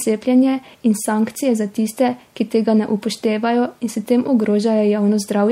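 From start to finish the speech has a watery, swirly quality with smeared consonant attacks, likely from MP3 compression at a low rate, around 64 kbps. Starved of bits, the encoder trims the treble and lets weak frequency lines flicker between frames, and that damage is plainly audible.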